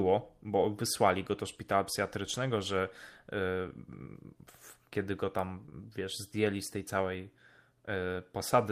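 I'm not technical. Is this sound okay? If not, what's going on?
No. At 5.65 s and again at 5.69 s, running to about 5.74 s, there are two back-to-back cases of short concealed packet loss, just before "wiesz zdjęli z tej". Each time, about 20 ms of the call arrived too late to play. The receiver covered each gap by stretching out the sound it had just played, then blended back in. You hear it as a brief smear or wobble, and a short sound there may drop out.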